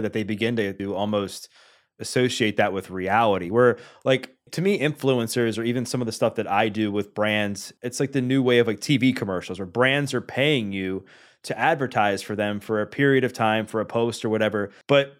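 Listening to the speech in this clip, nothing stood out as a technical problem.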